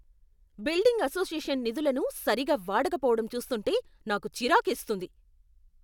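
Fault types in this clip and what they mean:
No faults detected in this speech recording; nothing to list.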